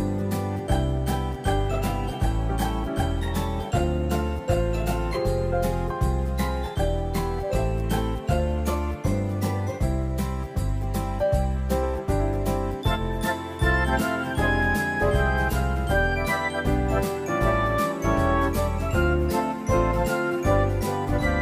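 No technical faults can be heard anywhere in this audio.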